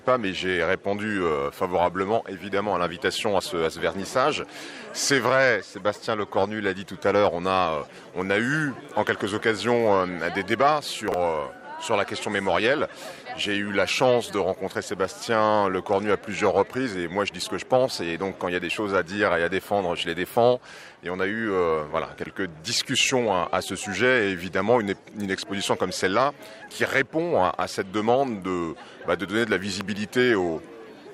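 At 11.08 s a 20 ms chunk plays two chunks late, out of order, through 11.14 s. At 22.18 s another comes three chunks late, through 22.26 s. Nothing is missing. Each reordering leaves hard joins, heard as a brief jumbled stutter.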